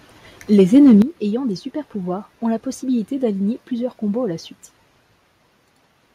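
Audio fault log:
0.58–0.93 s, microphone overload: harsh crackle on the loudest peaks before "ayant des", their tops flattened, likely input gain driving the converter about 3 dB past its limit.
1.02 s, microphone volume stepped down: speech and background suddenly fall about 9 dB before "ayant des", likely call software lowering input gain after the clipped peak.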